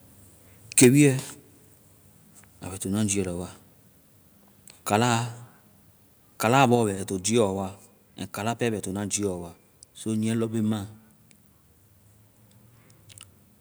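From 0.77 to 0.87 s the loudest speech peaks are flattened and take on a harsh, crackling edge. This sounds like microphone overload, most likely an input level about 10 dB too hot for the converter. The waveform shows squared-off tops on around one in twenty samples, and the spectrogram shows broadband smearing above the harmonics.

At 0.84 s, in the middle of that distorted stretch, the voice and the background drop together by about 2 dB. This is a microphone volume step-down, likely the call software cutting the input gain in one move after detecting clipping. The waveform envelope shrinks abruptly there, and the spectrogram dims slightly across every frequency at once.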